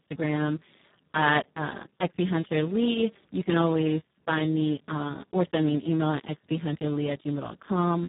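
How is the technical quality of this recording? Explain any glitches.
The technical quality is poor. The speech runs through Speex codec damage for the whole clip. With so few bits for the excitation, the voice turns hoarse, noisy and robotic. Nothing reaches above 3.8 kHz, pointing to a very low bitrate near 4 kbps.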